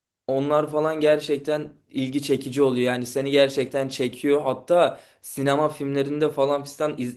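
Nothing's wrong with this speech clip; the Opus voice compression it went through is working as it should, and there's no technical problem to point to anywhere in it.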